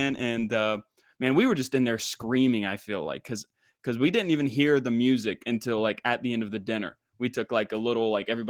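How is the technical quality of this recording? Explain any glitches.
The recording has one fault, and it is clearly audible: Opus voice compression throughout, from start to finish. The speech has the character of Opus running in its hybrid mode, where a linear-prediction coder carries the lower band and a transform layer covers the top, keeping a fullband response. The grain of the damage points to a starved budget of roughly 16 kbps in 20 ms frames. The excitation is coded coarsely, so the speech sounds hoarse and slightly robotic, with a plainly audible processed texture.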